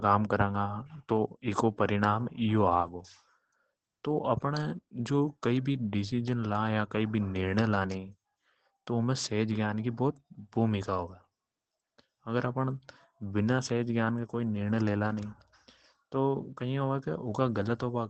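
From start to finish the speech carries Opus voice compression, and the damage is plainly audible. The voice sounds muffled, a little hoarse and faintly robotic. That fits the SILK linear-prediction coder running at a low rate around 12 kbps and coding the excitation coarsely. The band is held to wideband, so a spectrogram shows a hard ceiling with nothing above 8.7 kHz, and the harmonics beneath it look smeared and grainy rather than crisp.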